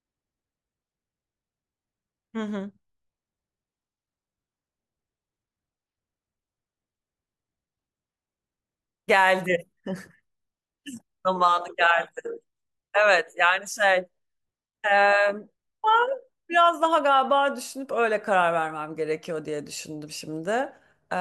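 No technical faults can be heard in the recording.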